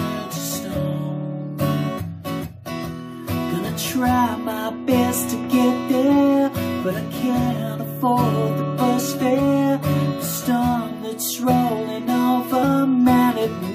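At 12.62 s, damaged data in the compressed stream throws the decoder out of sync while it hunts for the next valid frame, leaving a brief glitch.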